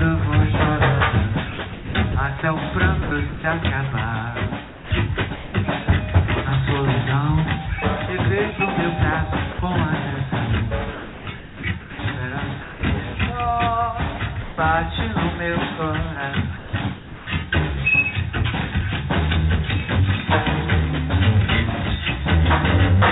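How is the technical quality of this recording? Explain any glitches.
The recording has repeated gaps where real sound is swapped for synthetic background, and the band stops at 4 kHz, as a G.711 A-law call path would produce.

Sound chopped by the voice detector appears at 1.52–2.42 s, 3.02–3.44 s, 4.67–5.54 s, 10.94–11.99 s and 16.58–17.27 s. Pieces of sound flicker out into hiss and back. The likely cause is the sender's detector toggling transmission off, with the receiver filling comfort noise.

Sound dropped by the voice detector occurs at 9.53–9.59 s, 12.62–12.83 s and 14.42–14.57 s. Brief stretches, 60 to 180 ms, vanish into steady noise. The detector likely judged them background and stopped sending.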